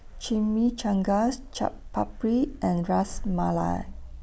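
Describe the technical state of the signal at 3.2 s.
At 3.2 s the speech signal is intact, with no audible technical fault at that moment.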